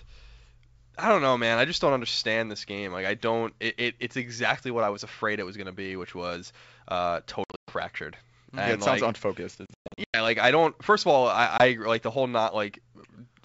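Hard-edged gaps of silence break the speech at 7.44 to 7.73 s, 9.66 to 10.19 s and 11.58 to 11.66 s, with the speech slightly distorted as sound resumes. This is packet loss on an ADPCM call: the missing stretches were filled with silence, runs of up to 120 ms at a time in the first two bursts, and the decoder's predictor and step size drift from the sender's before resettling. The 64 kbit/s G.722 wideband coding stays clear around the dropouts.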